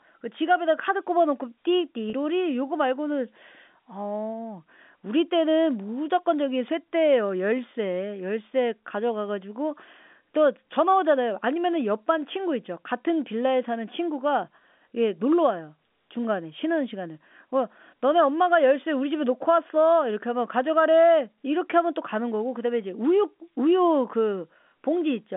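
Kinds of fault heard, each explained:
Packet loss with pitch repetition: around 2.1 s about 30 ms drops out, likely a single lost packet, and the receiver fills it by repeating the last pitch period over the narrow telephone band.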